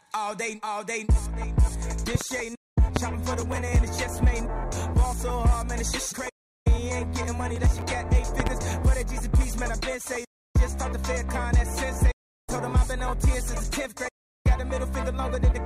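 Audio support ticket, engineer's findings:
Loud pop, 2.15–2.24 s: likely a voltage step from a plug, switch or static discharge, shaped by the downstream circuitry into two close thumps about 15 dB above the signal. The sound keeps going underneath.

Loud pop, 2.96 s: likely a driver glitch or static spike. A single sharp pop, about 20 dB over the signal and roughly 30 ms long, sits on top of the continuing audio.

Loud pop, 8.40–8.49 s: likely a switch or plug transient. A double pop about 15 dB above the signal, with the sound running on beneath it.

Processor overload crackle, 3.37–3.88 s: CPU load exceeds what the audio thread can service. About 20 buffer deadlines are missed, and each missed buffer is skipped outright rather than held. The hard-edged gaps fit a buffer well under a millisecond. Heard as half a second of gritty tearing over the sound.

Processor overload crackle, 7.56–7.95 s: the same overload, with a denser run of skipped sub-millisecond buffers. 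It causes about 0.4 s of crackle that stops once the load drops.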